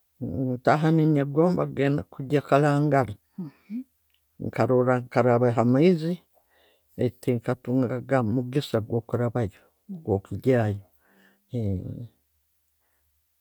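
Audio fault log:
No fault is heard anywhere in this speech recording. There is nothing to log for any part of the clip.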